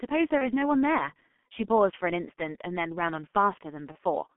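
From start to finish the speech sounds muffled and hoarse, with consonants smeared together and a rough, grainy edge on vowels. Nothing comes through above about 3.4 kHz or below about 200 Hz. This is the G.723.1 codec, which heavily damages the signal here. Its coarse model of the voice is refreshed only every 30 ms, too slowly to follow quick articulation, and the sound fits its low 6.3 kbit/s mode.

At 0.38 to 0.50 s, and again at 3.92 to 3.98 s, the speech briefly turns into a stretched sound that sags in level, then comes back weak or distorted before recovering. This is VoIP packet loss concealed by the speech codec. Each gap fits a single lost 30 ms frame. The decoder filled it by repeating its last pitch and filter with falling gain, and because each frame builds on the previous one, the damage outlasts the missing packet.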